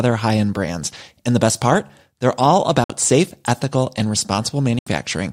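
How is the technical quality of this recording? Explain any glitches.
The speech is broken by two short gaps in the sound. A Bluetooth dropout at 2.84 to 2.90 s and another at 4.79 to 4.87 s cut the speech to silence for about 56 ms and 75 ms, likely because wireless audio packets missed their delivery deadline and were discarded, which fits roughly three and four lost packets. Each gap starts and ends sharply, within a few milliseconds, and the speech resumes further along, as though it had kept playing through the hole.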